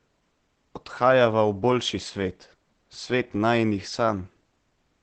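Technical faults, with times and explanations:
Throughout, Opus compression: speech is muffled and hoarse, with nothing above 8.4 kHz, a flat spectrogram ceiling, likely from a speech-mode encode around 16 kbps.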